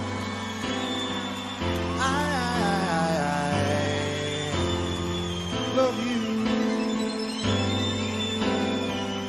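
No technical faults are audible.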